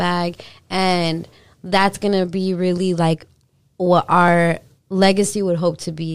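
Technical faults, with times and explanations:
2.28–5.79 s, periodic USB or driver dropouts: ticks every 0.5 s after "that's gonna", as a briefly stalled driver skips a fraction of a millisecond of speech each time.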